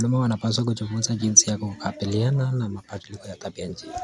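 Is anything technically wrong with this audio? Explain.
No, nothing technically wrong can be heard here.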